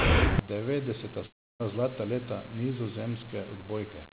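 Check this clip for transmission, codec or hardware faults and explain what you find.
Two faults are audible, one lasting most of the clip and one short break within it.

From 0.39 s to the end, one channel inverted is the likely cause: one stereo side appears to have had its polarity flipped, so when the two channels are summed to mono, everything they share cancels. The level drops by about 38 dB, and the centred speech almost disappears. What little remains is the difference between the channels, a faint residue in place of a full voice.

From 1.26 s to 1.62 s, a long network dropout is the likely cause: about a third of a second of audio never reached the receiver. The receiver filled the gap by extending the last sound, which decays as a buzz or hiss into silence before the audio resumes with that stretch missing. All of this sits within the narrow band of a G.711 call line, with nothing above 4 kHz.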